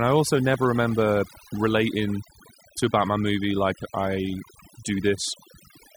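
Right from the start there's overdone noise removal: the reduction was pushed so hard that frequency bands sitting near the noise estimate get pulled down or shut off, taking the quieter parts of the speech with them. The background drops and breaks up into little twinkling specks.

Then, between 0.54 and 0.56 s, right after "I also" and before "remember relating to a", there's a single loud pop that jumps roughly 10 dB above the speech while the talking carries on underneath. It's a sharp electrical spike added to the signal, likely from a plug, switch, static discharge or driver glitch.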